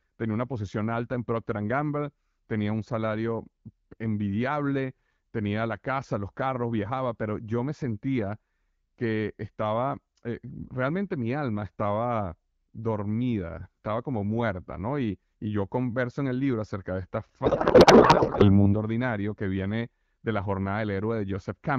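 Speech coded with AMR wideband (HD Voice) at a rate consistent with 12.65 kbit/s is cut by a codec payload misread from 17.45 to 18.71 s. The speech becomes garbled noise and warble that barely tracks it, which fits octet-aligned AMR frames being decoded as bandwidth-efficient.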